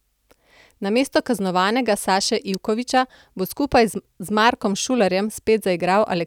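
A nearby switch or motor likely arced at 2.54 s, leaving an electrical switching spike: a sharp snap at around -15 dBFS over the speech.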